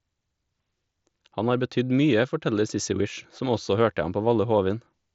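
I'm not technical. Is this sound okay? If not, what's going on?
Yes, I hear nothing wrong with this recording.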